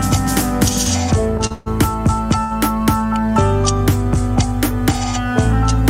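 A short stall from a late packet at 1.47 to 1.52 s holds the last sound for about 36 ms with a slight buzz. A packet arrived after its slot, so the jitter buffer ran dry and playback resumed where it left off. A call audio freeze follows straight on, from 1.52 to 1.68 s. About 136 ms of buzzy continuation fills in without dropping to silence, likely because packets were held up in transit, and the sound then picks up with nothing lost. A second short stall at 2.44 to 2.53 s stretches the sound by about 68 ms before it continues.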